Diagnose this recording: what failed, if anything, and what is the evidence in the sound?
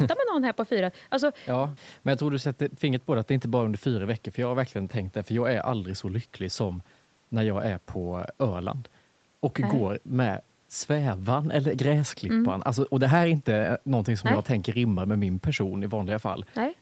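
Nothing failed; the recording shows no faults.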